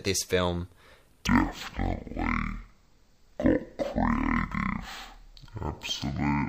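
From 1.27 s, right after "this film", the speech drops to half speed and a full octave lower, about 12 semitones down, through to the end. That's stereo read as mono: interleaved left and right samples were played back one after another as a single channel.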